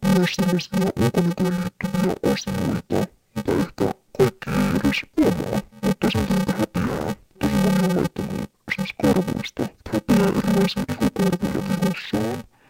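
Speech, with interleaved audio read as planar throughout: 2.9 ms blocks make it dull and robotic with a 345 Hz buzz, seen as evenly spaced spectrogram bands and waveform jumps every block.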